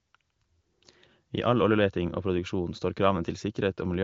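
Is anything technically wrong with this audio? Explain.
No, nothing's wrong here: it's speech carried over AMR wideband (HD Voice) at 23.05 kbit/s, so the sound tops out around 7.6 kHz as that narrower phone-call band would lead you to expect, and there's nothing to flag.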